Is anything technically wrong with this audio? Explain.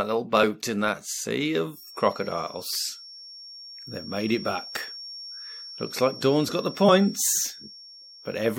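Yes, two faults are audible.

From 1.70 s, just after "in that sea", to the end, a feedback whistle sits behind the speech: a thin, steady tone at 5.5 kHz, roughly 20 dB below the voice, wavering slightly in level. The likely cause is a loudspeaker-to-microphone loop held just at the edge of feedback, so one frequency rings on without building up. Unlike electrical interference tones, which hold a rigidly constant level, this one drifts gently in loudness.

At 6.88 to 6.90 s, compressed frames were skipped. The speech jumps ahead by about 20 ms, which fits the loss of a single codec frame of around 23 ms, missing from the stream or rejected by the decoder as damaged. Because adjacent frames overlap, the join comes out as a brief smeared blip. That is what separates it from a dropout, which leaves a gap of silence, or a sample-level glitch, which gives a sharp click.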